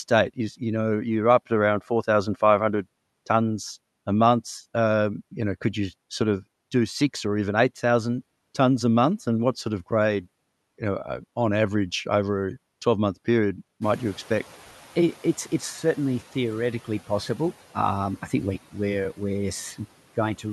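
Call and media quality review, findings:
Noise suppressor catching up, 13.81 to 15.65 s, between "month period" and "certainly theoretically possible". Room noise jumps about 17 dB around 14 s. The suppressor's noise estimate lags, so the noise passes under-reduced, then drops about 5 dB over 1.84 s as the estimate adapts.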